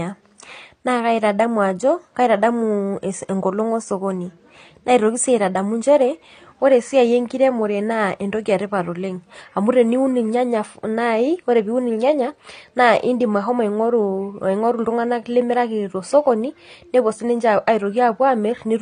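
AAC compression damage runs through the whole of this speech clip, from start to finish, and is plainly audible. Nothing sounds above 9.6 kHz, so the top end is dull and sibilants lack their air. That low cut-off, with the smeared, warbling texture, is likely the work of an AAC-LC encoder starved of data, which fits a bitrate around 32 kbps: with too few bits per frame, the coder drops high bands and quantises the rest coarsely.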